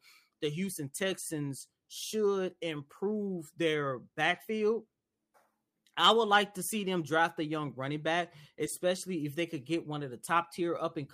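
Nothing here trips a fault; the speech runs along without anything going wrong along the way.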